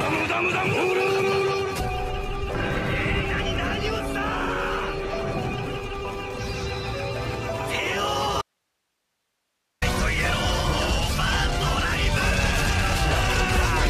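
From 8.42 to 9.82 s there is an audio dropout to a faint residue. The sound cuts abruptly, leaving only hiss roughly 55 dB down, likely a brief break upstream.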